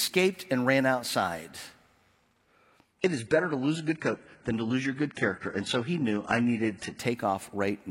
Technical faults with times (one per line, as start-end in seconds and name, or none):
2.99-6.99 adaptive stream at a lower bitrate